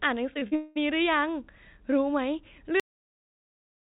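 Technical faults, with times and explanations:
0.34–0.77 s, repeated packet loss (robotic sound): four holes open in quick succession, the longest about 200 ms, and about 63% of this span is filled by stretching out the last received sound rather than by real signal. The repeated patches give a choppy, stuttering texture with pieces missing. A single dropout would leave one brief gap. Here the concealment keeps restarting, which is what makes it robotic rather than simply choppy.
2.80 s, cut-off end: the sound stops mid-utterance and falls straight to digital silence that lasts to the end, with no decay or tail. The final stretch of audio was never written out, so the ending is abrupt rather than tapered. A deliberate fade would slope down, and a natural pause would still carry room tone, but this drop is instant and completely empty. The band-limited call audio, with nothing above 4 kHz as expected of G.711 telephone coding, simply halts at this point.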